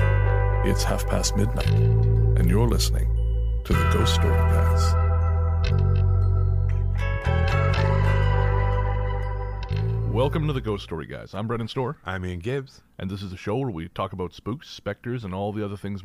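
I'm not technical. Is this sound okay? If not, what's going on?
Yes, nothing in this recording points to a technical problem, so the signal is in good working order throughout.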